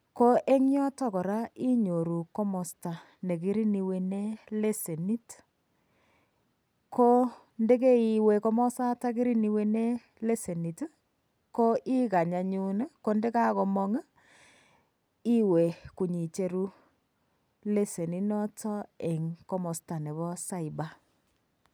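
There are no technical faults to describe in this speech recording.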